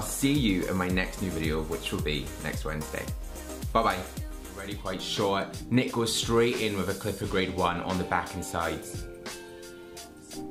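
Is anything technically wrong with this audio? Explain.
No, nothing stood out as technically wrong when listening to this audio.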